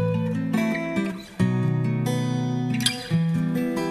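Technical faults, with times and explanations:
No technical faults can be heard in this clip. There is nothing to time or explain.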